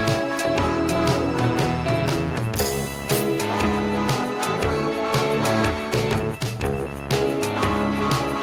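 No technical faults can be heard anywhere in this music.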